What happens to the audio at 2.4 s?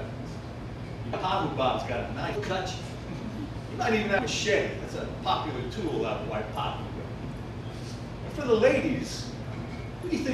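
Compressed frames skipped at 2.35 s: about ten frames of roughly 26 ms each never reach the output, either missing from the file or rejected by the decoder as damaged. The audio jumps ahead by roughly 300 ms, leaving an abrupt splice at that join.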